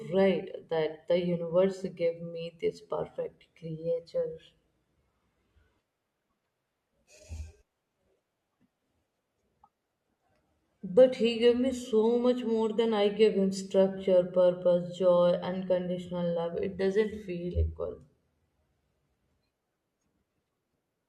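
A speech recording with one fault near the start. From 0.41 to 0.46 s there is a short glitch. It comes just before "that the universe". This is damaged data in a compressed stream. Part of the encoded audio was corrupted. The decoder could not read those frames correctly and lost its place. It misread or dropped them, then resynchronised at the next valid frame header.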